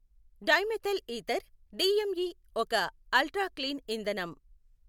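No technical faults can be heard anywhere in the recording. There is nothing to mark at any point along the timeline.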